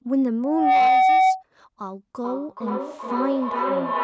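Speech recorded through a call's microphone path, with nothing above 8 kHz, carrying two faults. From 0.43 to 1.43 s there is loudspeaker feedback squeal: a steady 755 Hz tone swells over roughly a third of a second to around 10 dB above the speech. The microphone is hearing its own loudspeaker, and at that frequency the loop gain has passed one, so the tone keeps growing until it is cut. From 2.24 s to the end there is feedback echo between two devices. The speech comes round again roughly every 400 ms, the loudest return about 6 dB below the direct sound. A second device in the room is playing this microphone's audio back into it, and the echo canceller cannot remove sound it did not play itself.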